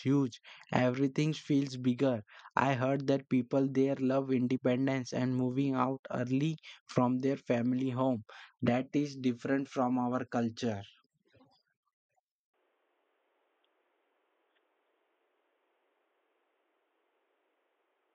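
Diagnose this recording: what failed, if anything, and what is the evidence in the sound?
From 12.54 s to the end, the speech turns dull and boxy with no gap or level jump. A spectrogram shows everything above 3.8 kHz vanishing at that instant, over a faint new noise floor. The likely cause is an input switched to a poorer, narrower-band device at the driver stage.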